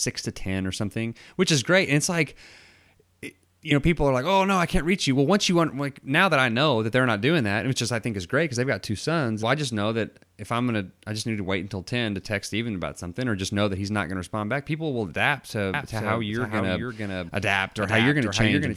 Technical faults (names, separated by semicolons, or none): doubled audio track